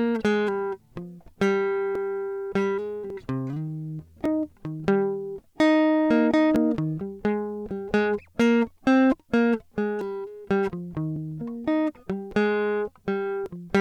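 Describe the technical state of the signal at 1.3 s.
At 1.3 s the music sits inside a run of clock drift buffer slips lasting from 0.80 to 13.46 s: a click recurs every 1.15 s while signal plays. The likely cause is two devices on separate clocks disagreeing by around a thousandth, so a buffer drifts until a few dozen samples are dropped or repeated. The strict metronomic spacing is what separates this from network dropouts or dirty-contact crackle, which arrive irregularly.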